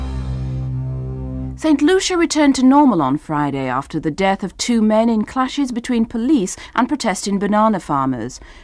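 No technical faults can be heard at any point in the audio.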